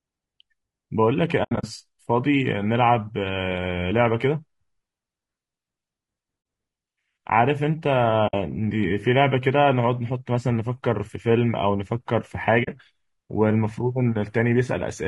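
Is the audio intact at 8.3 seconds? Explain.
No. From 8.27 to 8.34 s there is AAC frame loss with muting: the decoder zeroed the missing frames, consistent with about three lost frames. Overlapping windows fade the sound out and back in, leaving a soft-edged hole, unlike an abrupt hard-cut dropout.

Underneath, the speech is rough and grainy, with noise between the harmonics. Its likely cause is low-delay AAC compression (AAC-ELD) at a rate around 32 kbps, which is steady throughout the clip rather than a momentary break.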